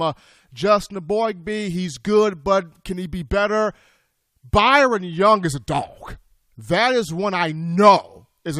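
No technical faults detected anywhere in the speech.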